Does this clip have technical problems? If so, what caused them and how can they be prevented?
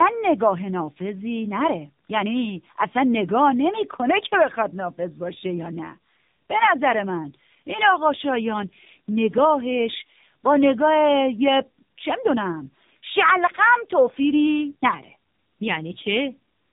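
Yes. Tandem speech coding runs throughout: the speech sounds like two narrowband coders in a row, fitting AMR-NB passed through a G.711 link and re-encoded, with each stage compounding the roughness, muffling and warble, and nothing above 3.8 kHz. Prevent it by keeping one codec end to end, using transcoder-free operation between networks.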